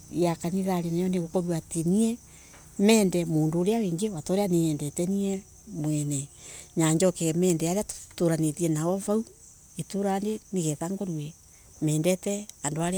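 No technical faults are audible anywhere in the speech recording.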